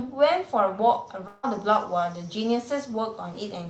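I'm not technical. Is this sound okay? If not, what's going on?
No. Between 1.27 and 1.45 s, a long network dropout likely stopped the audio from arriving. A brief fading buzz fills the gap, and that bit of speech is lost.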